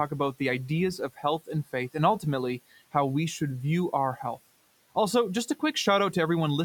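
Between 0.98 and 1.49 s, just after "about the ideas" and before "and faith and", the noise suppressor mistook quiet parts of the speech for the room noise, about 24 dB below the speech, and cut them by up to about 14 dB. Roughly a sixth of a second of sound comes out swallowed and faint.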